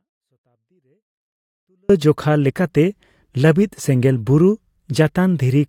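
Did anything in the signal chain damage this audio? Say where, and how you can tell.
Yes. The damage sits at the sample-format conversion stage, as a 24-bit alignment error that leaves the audio too quiet. From 0.0 to 1.9 s, 24-bit samples packed into the low bytes of each 32-bit word were read as full 32-bit integers, so every value is treated as 256 times smaller than it is. The speech there is still clean, but it sits about 48 dB down and is almost inaudible. After 1.9 s it returns to normal level.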